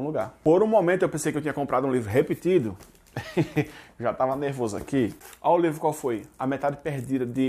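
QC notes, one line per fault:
No fault found, so there is nothing to log in the QC notes.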